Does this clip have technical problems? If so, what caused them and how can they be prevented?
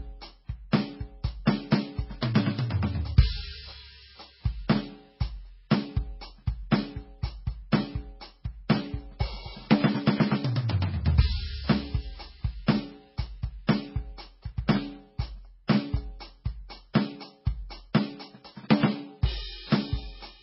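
Yes. Transcoding between lossy codecs runs throughout the music. Nothing is heard above 5.6 kHz, and two different kinds of smeared, warbling artefacts sit on top of each other. The likely cause is a very low-bitrate MP3, around 16 kbit/s, later re-encoded to AAC at around 48 kbit/s. The second encoder spent its bits on the first one's damage and kept its low cut-off. To prevent this, encode only once, from a lossless source, at an adequate bitrate.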